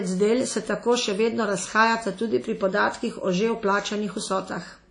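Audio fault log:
Throughout: WMA compression, likely. The speech sounds ringing and washy. A hiss swells and fades with the signal. Nothing is heard above 10.1 kHz. The plainly audible damage fits a WMA 1 encoder at 32 kbps zeroing weak spectral lines.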